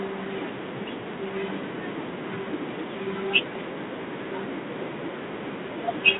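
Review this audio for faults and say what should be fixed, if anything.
A harsh, rasping hiss rides on the speech throughout, rising and falling with its level, and nothing passes above 3.9 kHz. This is G.726 ADPCM coding at a low bit depth, which fits 24 kbit/s. To prevent it, carry the call at 32 kbit/s or use a wideband codec.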